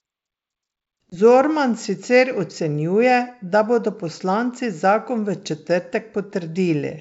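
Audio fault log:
1.10 to 1.14 s, packet loss on an ADPCM call: the speech drops into a hard-edged silent hole about 20 ms long, roughly one packet's worth, and comes back slightly distorted before settling. The decoder filled the lost stretch with silence, so its adaptive predictor and step size no longer matched the sender's and needed some tens of milliseconds to resynchronise. The surrounding G.722 wideband coding at 64 kbit/s carries faint or no codec damage.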